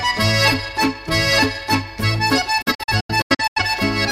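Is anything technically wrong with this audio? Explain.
Yes. From 2.62 to 3.62 s there is a digital broadcast dropout: corrupted frames made the receiver mute, with 8 ms fades, leaving short silent holes totalling about 430 ms, the longest 85 ms.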